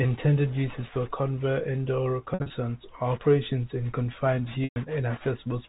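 Packet loss with pitch repetition hits twice. From 2.34 to 2.50 s, after "is for covert indoor" and before "or operation in confined", 120 ms of sound goes missing in gaps scattered over 160 ms, the longest 60 ms. That fits about six 20 ms packets. The receiver fills each gap by looping the last pitch cycle, so the sound briefly holds on a flat, buzzy tone. In the waveform this shows as identical repeating cycles that fade away. On a spectrogram the harmonics run frozen and horizontal.

At 4.64 to 4.76 s, after "or operation in confined", another 120 ms drops, which again points to about six packets. The band-limited G.711 telephone sound stays the same around it.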